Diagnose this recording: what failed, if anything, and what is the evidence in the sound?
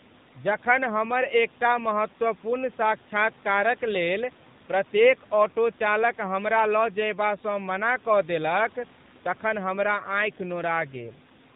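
AMR narrowband mobile codec damage runs throughout, at the codec stage. Nothing passes above 4 kHz, and the speech is plainly buzzy and synthetic. That fits a low mode near 7.4 kbps, where too few excitation pulses drive the vocal-tract model.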